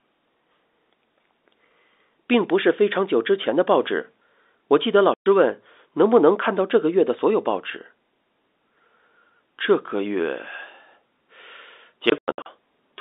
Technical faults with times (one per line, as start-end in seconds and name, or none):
5.14-5.26 packet loss filled with silence
12.10-12.46 packet loss filled with silence